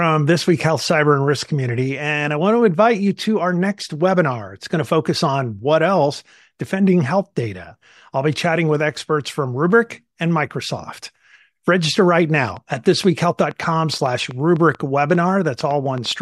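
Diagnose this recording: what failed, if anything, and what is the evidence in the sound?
A train of clicks points to the analogue wiring, likely interference from nearby equipment coupling into the line. From 12.36 s to 16.12 s, about fifteen similar pops arrive at an uneven pace of roughly 4.3 per second, ticking over the speech and pauses, peaking about 5 dB above it.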